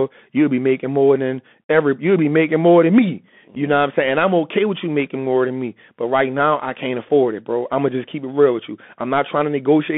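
Right from the start the whole thing has the Bluetooth CVSD headset codec sound. The speech is squeezed into a phone band of roughly 200 Hz to 3.5 kHz, so it's thin and boxy with no air on top. The damage is plainly audible: there's a grainy hiss riding under the speech, and sibilants come out scratchy because the one-bit up/down coder can't keep pace with fast, bright detail. That sound fits a 64 kbps CVSD link.

Then at 3.55 s, right after "making more than me" and before "know what I'm saying", there's a tiny hole from unconcealed Bluetooth headset packet loss. About 7.5 ms of audio, which points to a single lost packet, just drops out with nothing patched in. The edges are abrupt, and the speech comes back a touch quieter for a moment as the codec's step size recovers.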